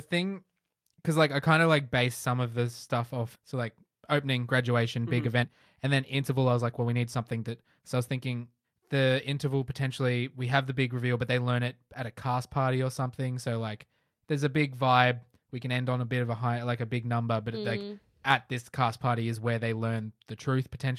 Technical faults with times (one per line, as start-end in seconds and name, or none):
3.35-3.37 skip ahead
4.97-8.59 jitter buffer speed-up